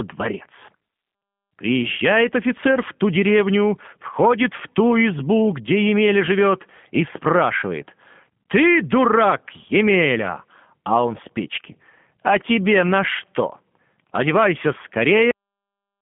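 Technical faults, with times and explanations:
Throughout, G.729 codec: the speech is squeezed through an 8 kbit/s telephone codec, nothing above 3.5 kHz, with a rough, slightly synthetic edge from the pulse-based rebuild.
15.31 s, cut-off end: the audio just stops mid-sound and drops to dead digital silence, no decay at all, because the final buffers never got written out.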